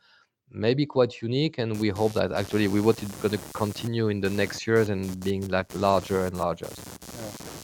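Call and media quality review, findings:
Computer activity noise, 1.74 s to end of clip (7.63 s). Buzz-like pulsing near 100 per second, about 15 dB below the speech. Load swings in the processor, graphics card or mouse modulate the shared audio ground. It follows machine activity and persists through pauses, unlike codec noise, which tracks the speech. It lacks the steady tonal lock of mains hum.

Short concealed packet loss, 5.60 to 5.62 s and 5.67 s. Brief smear or wobble in the speech. Each missed 10 ms of audio was bridged by the decoder extending the preceding sound, about 10 ms filled the first time and 7 ms the second, then cross-faded back. Unlike the error-correction frames, this is guessed continuation rather than a degraded copy of the real audio, so a short consonant can disappear.

Lost packet rebuilt from error correction, 10 ms frames at 5.61, 5.76, 5.80, 5.89, 5.98, 6.17 and 6.31 s. 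Momentary roughness and added noise with no gap. Each lost packet was replaced from the low-bitrate copy carried in the following packet (Opus in-band forward error correction). The audio content is still present, only coarser, which distinguishes these frames from the concealment smears just before them.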